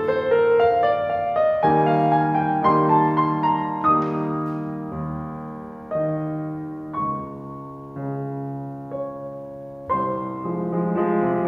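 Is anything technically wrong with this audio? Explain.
No, nothing technically wrong turns up anywhere in this music clip.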